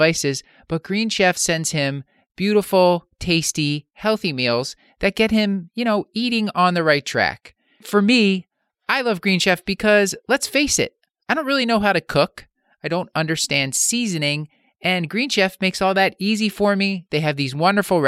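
No technical faults occur anywhere in the recording, so there is nothing to describe in time order.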